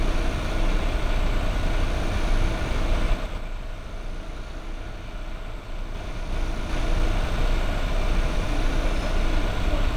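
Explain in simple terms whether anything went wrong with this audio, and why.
Zipper noise appears from 3.08 to 3.48 s and again from 5.76 to 7.0 s. The volume drops and later rises in a series of small jumps instead of gliding smoothly. Each jump makes a tiny click, so the sound picks up a ticking, zipping edge while the level moves.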